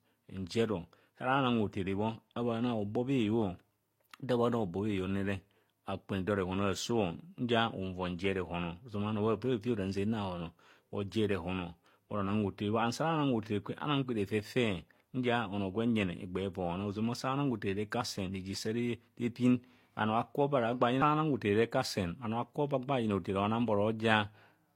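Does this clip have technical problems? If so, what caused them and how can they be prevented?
Yes. Throughout the speech, artefacts from one lossy codec are heard together with a different codec's own artefacts. This is likely transcoding between lossy codecs, such as HE-AAC re-encoded to Vorbis. A spectrogram shows nothing above 16.2 kHz. To prevent it, encode once from a lossless master.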